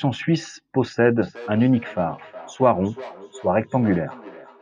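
From 1.22 s to the end of the speech, a feedback echo between two devices is audible. A second device in the same room plays back this microphone's signal, and the microphone picks it up again. The local echo canceller only removes its own device's playback, so the loop goes uncancelled. Each phrase returns roughly 0.4 s later, thinner and with a ringing colour, at most about 19 dB below the direct speech.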